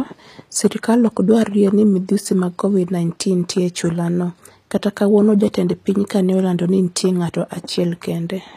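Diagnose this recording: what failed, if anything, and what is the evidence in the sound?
The fault sits at the codec stage. Throughout the speech, the treble sounds bright but synthetic: s sounds come out gritty and lispy, with plainly audible coding damage. This is likely HE-AAC compression at a low bitrate, around 24 kbps. Only the lower spectrum is truly coded, and the upper band is rebuilt by copying lower bands upward. A spectrogram would show a hard ceiling near 14.9 kHz, with blocky, repeated-looking texture above the crossover.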